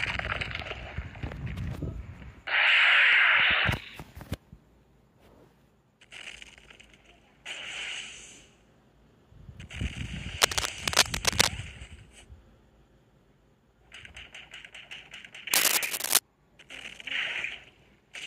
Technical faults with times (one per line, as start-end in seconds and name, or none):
10.42-11.48 cable scratch noise
15.53-16.19 cable scratch noise